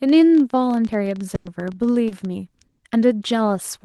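From 0.09 s to 2.26 s a rapid, uneven ticking runs over the speech and through its pauses. This is a train of clicks: about thirty similar pulses at roughly 14.5 per second, irregularly spaced, peaking at about the level of the speech itself. It is likely interference from nearby equipment or a faulty connection or power supply injecting the pulses.

At 1.35 s the sound freezes into a held, fading continuation, and the speech resumes at 1.48 s. This is a burst of packet loss. Roughly 100 ms of audio never arrived, and the receiver extended the last sound while turning it down. That 100 ms of speech is missing from the clip.

From 1.45 s to 1.47 s, at the end of that gap, a brief rough, noisy patch leads back in. This is a lost packet rebuilt from error correction. A 20 ms frame was reconstructed from the low-bitrate copy carried in the following Opus packet, so it plays grainier than the audio around it.

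At 2.09 s to 2.14 s there is a quick smear in the speech. This is short concealed packet loss. About 20 ms went missing, and the decoder bridged the hole by continuing the preceding sound before blending back into the real signal.

Within that stretch, from 2.11 s to 2.13 s, a second 20 ms frame sounds coarse and noisy. This is another lost packet rebuilt from error correction, decoded from the redundant low-bitrate copy. The call path's 12 kHz bandwidth is consistent with an Opus stream at around 32 kbps.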